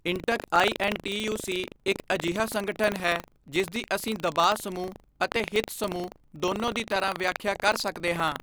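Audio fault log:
Throughout: buffer tearing. A robotic rattle at 25 Hz runs under the speech and drops out in pauses, because the writing program and the hardware reader have slipped and cross inside each buffer period. About 5% of every period replays audio from roughly 70 ms earlier, with hard joins at both edges. The buzz rate fits buffers of about 40 ms. A waveform shows a regular discontinuity every 40 ms during speech, and a spectrogram shows vertical clicks spaced at 25 Hz.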